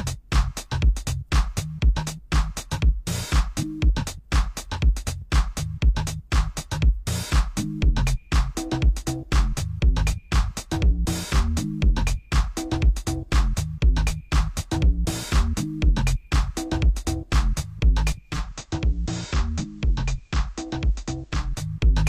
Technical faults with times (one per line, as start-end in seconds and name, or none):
18.11-21.73 digital radio blending to analogue